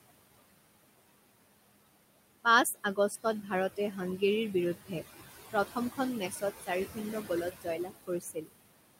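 Noise suppressor artifacts run through the whole of this speech recording. The suppressor pulls the room noise, which sits about 12 dB below the voice, down by about 20 dB between phrases and lets it back up under them, so the background pumps. Speech cut by the noise suppressor occurs from 2.74 to 4.22 s and from 5.53 to 8.54 s. The suppressor mistakes quieter speech for noise and turns it down by up to about 18 dB and about 22 dB respectively, making roughly a third of a second and then about a second of speech sound swallowed and faint.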